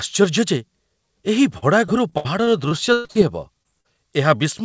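Speech carried over a call link whose band stops at 8 kHz, consistent with a G.722 wideband codec. From 1.58 to 3.17 s there is repeated packet loss (robotic sound). Around nine separate holes open in quick succession, the longest about 0.12 s, and together they cover roughly a quarter of that stretch. The receiver patches each one by extending the preceding sound, so the audio turns choppy and machine-like, with fragments missing, before the next dropout arrives. Shortly after, two cases of short concealed packet loss appear: one at 3.63 to 3.67 s bridging about 20 ms, and another at 3.81 to 3.86 s bridging about 40 ms. In both, the decoder covers the missing audio with a continuation of what came just before and then blends back into the received signal. The result is a brief smear or wobble rather than a clean gap.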